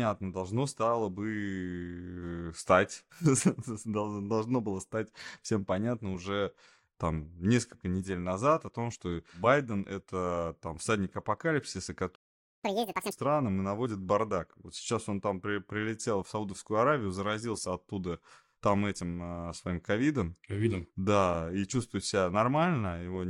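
At 12.15 s the speech just drops out for about half a second until 12.64 s, a playback stall, likely because the player ran dry or its thread got blocked. Right after, from 12.64 to 13.12 s, there's a catch-up at higher speed: the backlog runs at double speed, so the speech sounds rushed and chipmunky, nearly an octave up, before settling back to normal.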